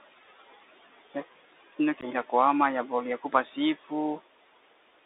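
From the start, the whole thing is squeezed through a Bluetooth CVSD headset codec. Nothing survives below about 300 Hz or above about 3.7 kHz, so the speech sits in that boxy phone band. The damage is plainly audible: the one-bit up/down encoder, which fits a 64 kbps CVSD link, can't keep up on loud, bright moments, so those edges distort, sibilants go scratchy, and there's a grainy hiss riding under the speech.

Also running the whole way through are noise suppressor artifacts. The room noise, which sits about 18 dB below the speech, gets pulled down by about 17 dB in the gaps and then swells back up whenever the speech comes in. That pumping comes from the suppressor deciding band by band what counts as noise.

At 2.01 s there's unconcealed Bluetooth headset packet loss, running to 2.04 s. The missing audio adds up to about 15 ms, roughly a couple of packets between headset and phone, and it was simply replaced by silence or an idle pattern. 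You hear a tiny hard-edged hole, and since it's a CVSD link, the sound comes back a touch quieter for an instant before it settles.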